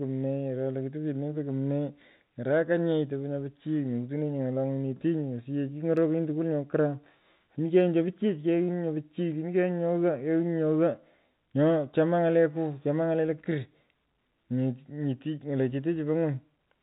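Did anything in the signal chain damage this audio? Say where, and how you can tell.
No, nothing in the chain damaged this speech: it has the band-limited character of G.711 telephone coding, which fits A-law at 64 kbps, and that stage is doing its ordinary job, leaving at most a faint trace of its own.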